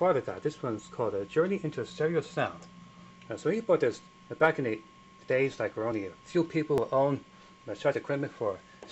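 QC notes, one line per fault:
0.79, 5.92, 6.78 and 7.94 s: dropped buffer (overrun). The sound jumps ahead without any gap. Roughly 20 ms goes missing at each of the first three points, and about 50 ms at 7.94 s. The likely cause is samples being overwritten before they were collected.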